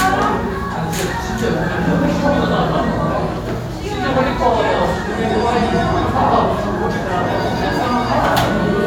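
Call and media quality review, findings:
Nothing stood out on listening to these sounds.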